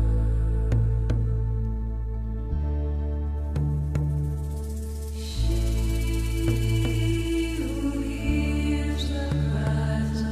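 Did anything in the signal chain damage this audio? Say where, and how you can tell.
No, nothing along the chain from capture through conversion, processing, transmission and playback has left any audible damage on the signal.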